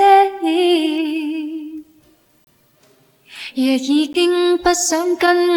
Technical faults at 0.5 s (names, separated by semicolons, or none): none